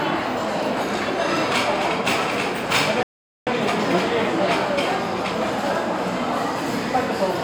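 A playback stall runs from 3.03 to 3.47 s: the sound cuts to silence for about 0.44 s mid-flow, then resumes. The player likely ran short of data or had its output thread blocked, leaving nothing to play until it recovered.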